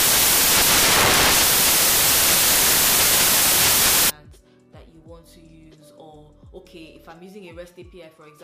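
The reader assembles each sample from the wrong bytes, so the rapidly changing low-order bits land in the most significant position. From 0 to 4.1 s this turns the audio into loud, harsh broadband noise.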